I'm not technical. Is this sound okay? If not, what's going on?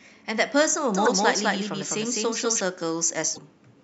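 No, there are two problems.

The first is a doubled audio track. From 0.95 to 2.61 seconds, a second copy of the speech plays about a fifth of a second behind the first. It is roughly as loud as the original, so the speech sounds smeared, like a close echo. It is clean, with no room sound. It starts and stops suddenly. The likely cause is that the sound was picked up twice, once through a slower route.

The second is damaged data in a compressed stream. The file is stored in a squeezed-down form. In two places some of that data is broken. The player cannot read it properly, so it stumbles and picks up again a moment later. You hear a short glitch from 1.05 to 1.08 seconds and again from 3.33 to 3.38 seconds.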